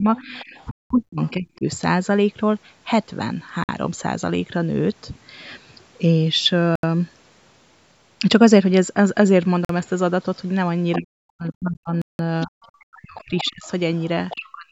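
A speech recording carrying three kinds of fault. The talker's level drops away in patches, by about 35 dB at its deepest across roughly a second between 0.0 and 1.67 s, and by about 40 dB over roughly two seconds between 10.98 and 13.66 s and again from 14.34 s to the end. This is speech suppressed in double talk: while sound from the far side was playing on the loudspeaker, the echo canceller likely could not tell its own talker from the loudspeaker echo and turned both down together. A second, quieter voice also comes through, about 25 dB below the talker from 0.16 to 1.30 s, and about 15 dB below in a brief scrap at 10.92 to 10.96 s and a longer stretch from 12.41 to 14.40 s. That is the other side's voice leaking through, most likely because the echo canceller left part of the loudspeaker sound in the microphone signal, so the far talker is heard alongside this one. Finally, the audio cuts to silence five times: at 0.71 s for 192 ms, 3.64 s for 51 ms, 6.76 s for 77 ms, 9.65 s for 45 ms and 12.02 s for 175 ms, each time resuming afterwards. 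These are Bluetooth stalls, where interference likely held up packets, the headphone buffer ran dry and playback paused until the resent packets arrived. The call microphone processing behaves as expected, with nothing present above 8 kHz.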